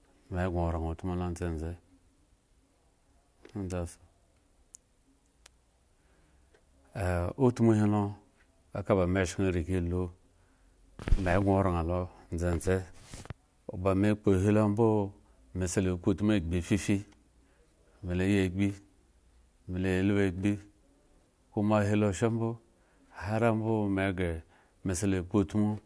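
Nothing in the recording of speech points to a technical fault anywhere along its signal path.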